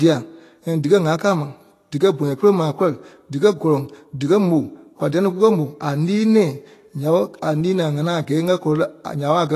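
From start to finish the speech sounds hissy and grainy, with roughened tones and softened consonant attacks, most likely Vorbis compression at a low setting, which fits a bitrate around 34 kbps. Coarsely quantised treble turns fine detail into noise. A spectrogram shows mottled, noisy high bands and nothing above 14.2 kHz.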